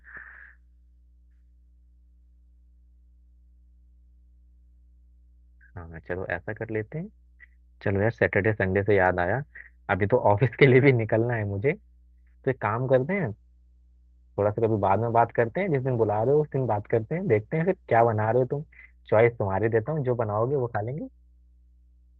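A ground loop or nearby transformer is coupling the 60 Hz power line into the signal for the whole clip, so a mains hum sits under the speech from start to finish. It is a steady low tone at 60 Hz with some low harmonics, roughly 30 dB below the speech.

From 12.96 s to 19.01 s there is a call bitrate drop. The call's bandwidth estimate fell and the Opus encoder was pushed to far fewer bits, which fits a fall from around 64 kbps to 16 kbps, held at its lowest for about 6.0 s. Coarser coding makes the speech sound rough and watery, and the audio bandwidth narrows from 20 kHz to 12 kHz, dulling the top end until quality returns at 19.01 s.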